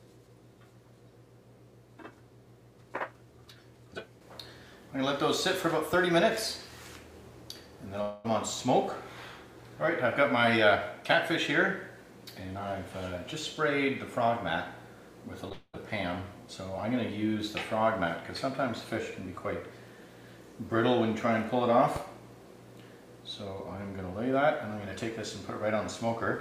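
At 5.93 to 5.96 s a loud pop sits on top of the sound, which carries on beneath it. It is a single sharp thump a few decibels above the surrounding level, likely a voltage step from a plug, switch or static discharge. On a waveform it is a narrow spike, and on a spectrogram a thin vertical line across all frequencies.

From 8.01 to 8.31 s there is a long network dropout, likely packets that never arrived. About 220 ms of audio is missing. The receiver keeps stretching the last sound into a fading buzz for roughly that span, then resumes with the lost part gone. A spectrogram shows frozen, smeared bands decaying in level.

At 15.49 to 15.52 s a short concealed packet loss leaves a 20 ms hole. The decoder patches only about 10 ms by extending the preceding sound, giving a brief smear, seen as a tiny blurred patch in the spectrogram.

Straight after, from 15.52 to 15.79 s, a second long network dropout removes about 220 ms. 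The concealment buzz fades over roughly 210 ms and is followed by about 20 ms of true silence, a flat gap on the waveform, before the audio returns.

At 21.96 to 21.99 s another loud pop appears, stronger at about 10 dB above the signal. It shows as a tall single spike and a broadband vertical stripe.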